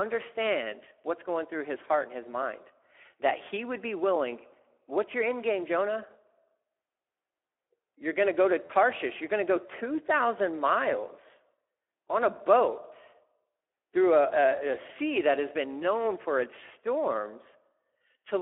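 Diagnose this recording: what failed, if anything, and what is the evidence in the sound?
Speex codec damage runs throughout, a codec-stage fault. The speech sounds plainly hoarse and noisy, the sound of an excitation starved of bits, which fits a setting near 11 kbps. The audio is confined to a 300 to 3400 Hz telephone band.

VoIP packet loss concealed by the speech codec occurs at 8.65 to 8.71 s, a network fault, between "going to go to" and "you're going to go". About 40 ms, which fits two lost 20 ms frames, becomes a fading extrapolation of the last pitch and filter.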